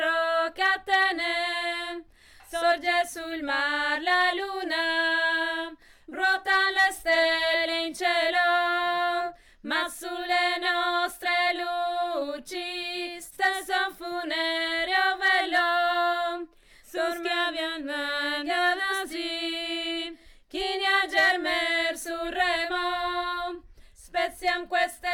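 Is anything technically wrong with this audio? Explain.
No, nothing is technically wrong with this audio.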